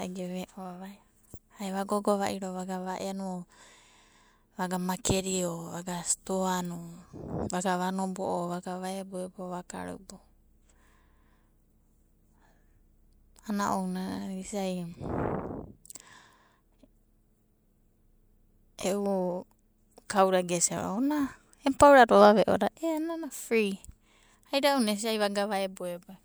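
No technical faults can be heard anywhere in this speech recording.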